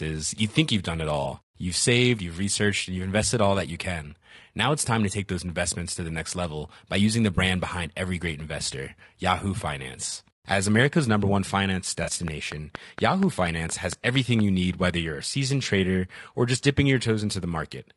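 Throughout, the speech sounds rough and grainy. Noise fills the gaps between harmonics. The top band sounds thin and synthetic. This is likely low-delay AAC compression, AAC-ELD, whose short frames resolve pitch poorly. The damage is plainly audible and fits a rate near 32 kbps.

At 1.23 to 1.26 s and 7.35 to 7.38 s, AAC frame loss with concealment occurs. About 20 ms of audio is missing each time. The decoder rebuilds it from the last good spectrum. Each gap becomes a brief smeared, noisy patch. From 12.03 to 12.10 s, a longer loss of about 40 ms produces a wider, phasey smear.

From 12.28 to 14.40 s, a train of clicks sits over the speech. Around ten similar pulses arrive at a regular pace of about 4.3 per second. They peak at about 15 dB above the signal. They sound like steady ticking, heard in pauses too, likely from interference or a faulty connection.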